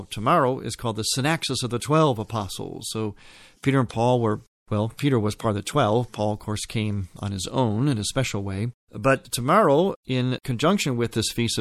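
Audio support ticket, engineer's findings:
MP3 compression, throughout the speech. Watery, swirling texture, metallic chirps on s sounds, consonant attacks smeared. Likely lossy encode starved of bits, fits roughly 64 kbps: weak frequency lines zeroed, flickering frame to frame.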